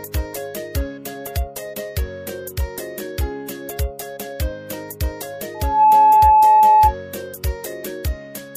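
Loudspeaker feedback squeal from 5.54 to 6.95 s: the microphone re-amplifies its own loudspeaker, so an 859 Hz tone swells within a few tenths of a second to about 15 dB above the sound.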